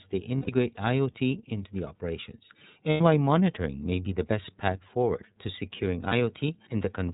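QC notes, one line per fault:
Throughout: iLBC codec. The speech is band-limited, with nothing above 4 kHz. The damage is plainly audible. Voices sound clear but rough and slightly synthetic. The codec models the excitation of each short frame on its own, without leaning on the previous frame. Fine detail is lost in that modelling. The texture fits 30 ms frames at a rate near 13.3 kbps, iLBC's lower-rate mode.
0.36–0.49 s, 2.91–3.01 s, 6.08–6.13 s: lost iLBC frames. Each gap is filled by a held, slightly buzzy vowel. The decoder repeats the last pitch cycle mixed with noise. The gaps last about 120, 90 and 30 ms, which fits four, three and one lost 30 ms frames. The second falls between "into the operations" and "why monitoring may be". The third follows "path forward to securing". Each frame stands alone, so speech recovers almost at once.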